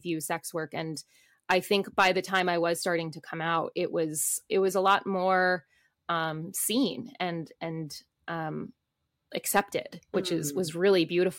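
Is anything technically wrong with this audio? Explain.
Yes, there is hard clipping in three places in this speech. From 1.51 to 2.40 s, after "sex work and" and before "I was starting to", the signal is overdriven by about 7 dB. A brief spell follows from 4.86 to 4.95 s, after "was it was a", at about 2 dB. The last, from 9.57 to 9.60 s, comes just before "which mm" at about 6 dB. Each time the peaks exceed what the stage can pass, so the waveform shows flat-topped plateaus. The squared tops spray harmonics upward, seen as vertical smears reaching high into the spectrogram. It is heard as crackle on the peaks, or as a harsh fuzz where the overload is large.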